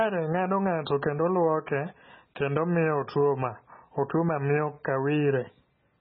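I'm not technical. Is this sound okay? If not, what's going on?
No. From start to finish the speech sounds dull, watery and swirly, with nothing above about 5.5 kHz, so s sounds lose their crispness. The likely cause is heavy MP3 compression: the file was squeezed so hard that the treble was cut off and fine detail was thrown away.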